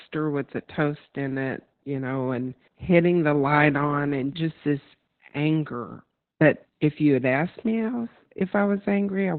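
From start to finish the speech sounds muffled, hoarse and faintly robotic, with nothing above 4.3 kHz. This is heavy Opus voice compression: the SILK coder has cut the band to narrowband and coded the excitation coarsely, which fits a bitrate near 8 kbps.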